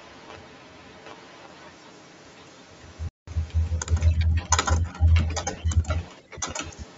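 From the start right through to the end at 0 s to 7 s, there's a second copy of the speech trailing by about 0.71 s, roughly 10 dB quieter: an echo leak, likely a far-end speakerphone whose echo canceller let its pickup slip back. Then at 3.09 to 3.28 s the sound cuts out abruptly for about 186 ms and picks up further along, a Bluetooth dropout, which fits roughly eight packets missing the headphones' deadline.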